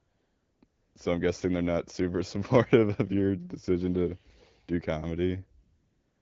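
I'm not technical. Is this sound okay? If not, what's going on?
No. At the start, from 0.00 to 0.61 s and again from 0.65 to 0.95 s, and at the end from 5.63 s to the finish, the real background disappears and is replaced by a smooth, even hiss that switches on and off. This is AMR comfort noise: the phone decided nobody was talking, stopped sending the actual sound, and the receiving end filled those gaps with a fake, steady background noise.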